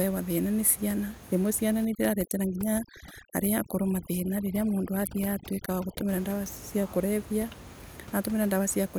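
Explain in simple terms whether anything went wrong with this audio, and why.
From 1.85 s to 6.09 s there is overdone noise removal. A cleanup tool set too strong strips out the background room noise heard elsewhere, leaving near silence with twinkling specks, and takes quiet parts of the speech with it.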